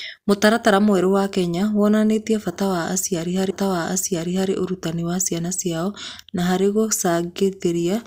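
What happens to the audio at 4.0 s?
At 4.0 s you're right in the middle of a stream segment repeated fault. From about 3.50 s to 4.50 s the player has served up the same chunk of the speech a second time, so a full second of what you just heard plays over again. There's a small blip where it jumps back to the start of the duplicate, and the whole clip ends up 1.0 s longer than it should be.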